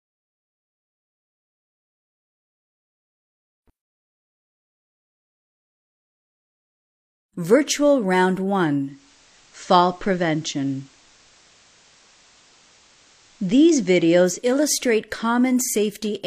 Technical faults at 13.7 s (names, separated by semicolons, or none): digital radio blending to analogue